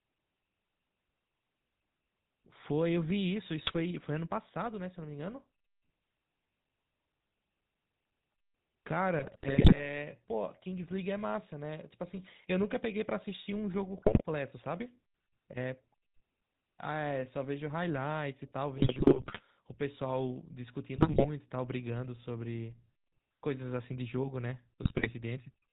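From start to finish the speech carries the sound of the GSM full-rate codec, plainly audible and consistent with the 13 kbps full-rate scheme. The codec models the vocal tract as a filter and excites it with a coarse, regularly spaced pulse train, decimating the excitation, and it discards everything above 4 kHz. The result is a dull, band-limited voice with a persistent buzzy, gravelly roughness on voiced sounds.

GSM bit errors then break through in six bursts, at 3.64–3.77 s, 9.18–9.88 s, 13.94–14.23 s, 18.78–19.41 s, 20.96–21.25 s and 24.82–25.11 s. The harshness points to error rates of a few percent. Corrupted filter, pitch and gain parameters reach the decoder, so affected frames get a warped spectrum or a sudden level jump. These stretches come out as squawks, pops and gargling, with the longest damage around 9.2–9.9 s and 18.8–19.4 s.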